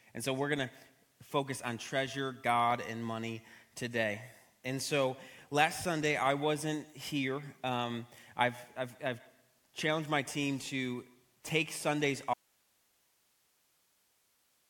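At 12.34 s the sound cuts out abruptly and never returns. What's left to the end is plain hiss, roughly 40 dB below the signal. That's an audio dropout to a faint residue: the source was likely lost while the path after the break stayed live.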